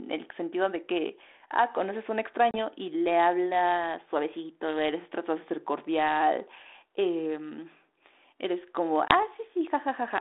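At 2.51 s the speech drops into a hard-edged silent gap of about 30 ms. At 9.08 s a second gap lasts about 20 ms. This is packet loss on an ADPCM call. Each gap throws the decoder's predictor out of step, so speech resumes slightly distorted.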